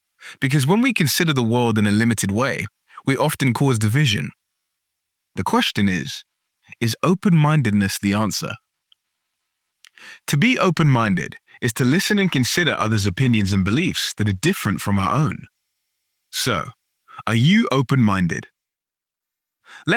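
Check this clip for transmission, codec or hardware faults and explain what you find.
One fault stands out. From 11.76 s to 19.11 s the sound turns rough, watery and muffled, bottoming out for about 3.8 s. This is a call bitrate drop: the bandwidth estimate fell, forcing the encoder to code coarsely and discard high frequencies, consistent with a fall from roughly 48 kbps to 16 kbps.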